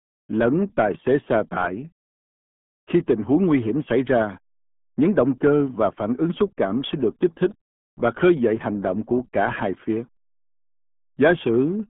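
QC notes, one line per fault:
Throughout, RealAudio 14.4 codec: the speech sounds muffled, gargly and boxy. The band runs roughly 150 Hz to 3.4 kHz, with nothing above 3.7 kHz. The coding damage is heavy. This fits an 8 kbit/s dial-up speech codec that discards detail to save bits.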